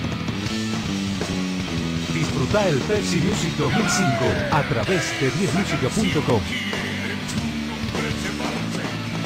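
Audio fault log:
Nothing to log here, since no faults turn up anywhere in the clip.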